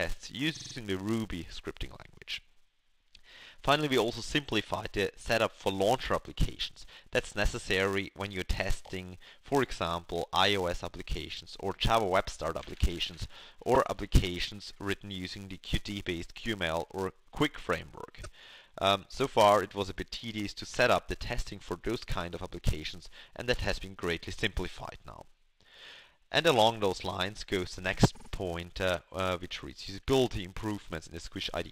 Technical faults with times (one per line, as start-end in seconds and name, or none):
0.00-31.71 filter restarted on every block
0.54-0.73 repeated frames
8.85-8.89 repeated frames
13.74-13.77 repeated frames
18.23-18.28 repeated frames
28.14-28.29 repeated frames